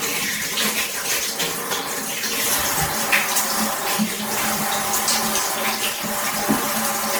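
From start to finish the sound has a swirly, smeared, hollow quality, with blurred attacks and nothing above 20 kHz. That's generation loss, likely from going through MP3 at something like 96 kbit/s around seven times, each pass stacking fresh quantisation noise and spectral gaps.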